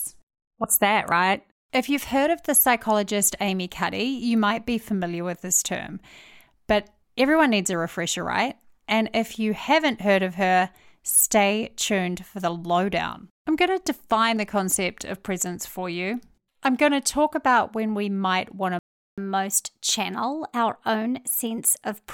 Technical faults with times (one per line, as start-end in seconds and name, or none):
18.79-19.18 playback stall
19.18-22.09 catch-up at higher speed